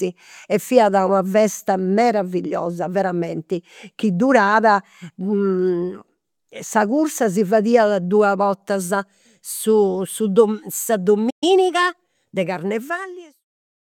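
At 11.30 s a playback stall occurs, likely because the player's buffer ran dry or its thread was held up. The speech cuts out in mid-flow and stays silent for about 120 ms, until 11.44 s, then resumes. From 11.44 s to 12.24 s comes a time-compressed catch-up as the player clears the backlog that built up during the gap. It does this by dropping short slices and cross-fading across the joins, so the speech runs about 1.15 times faster at its normal pitch. Shortly after, from around 12.5 s, the smooth fade-out brings the level down to nothing by 13.46 s.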